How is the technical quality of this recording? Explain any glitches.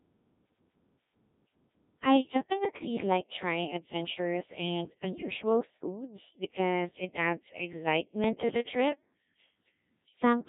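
Technical quality is poor: the speech has passed through a Codec 2 vocoder for the whole clip. The band runs only from 150 Hz to 3.6 kHz. The damage is heavy and fits a very low rate near 1.3 kbit/s. Only pitch, voicing, energy and a rough spectral shape survive, and the decoder rebuilds the voice from sine waves. The result sounds robotic and buzzy. Unlike an ordinary low-bitrate codec's warbling, the waveform itself is replaced, not smeared.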